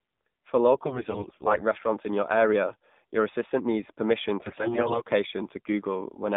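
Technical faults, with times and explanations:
Throughout: AMR narrowband mobile codec. The speech has come through AMR-NB at 7.4 kbps and is confined to a telephone band of roughly 150 Hz to 3.7 kHz, so it sounds thin, boxed-in and plainly processed. At this low rate the vocal-tract model is fed by only a few pulses per subframe, which leaves a buzzy, synthetic edge on voiced sounds. On a spectrogram nothing appears above about 3.7 kHz, leaving a flat empty ceiling, and there is little energy below 150 Hz.
0.74 to 1.62 s: AMR bit errors, ending just before "restaurants in your area". Flipped bits in the weakly protected part of each frame put the excitation pulses in the wrong places and corrupt the fine pitch, gain and spectral values, at an error rate of roughly 10 percent. Pitch and level hold roughly steady, but the voice turns hoarse and gargly. A spectrogram shows smeared, ragged harmonics with noisy fill between them, and the waveform looks rough without any gaps.
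4.42 to 5.09 s: AMR bit errors, just after "your assistant needs permission". This is the same corruption as before, but the error rate is heavier, about 15 percent, so the scratchy, gargling roughness is stronger and the voice loses more of its natural shape while keeping roughly the same pitch and loudness. On a spectrogram the harmonic stripes break up into blotchy, irregular texture across the band, and the waveform envelope stays continuous but looks jagged.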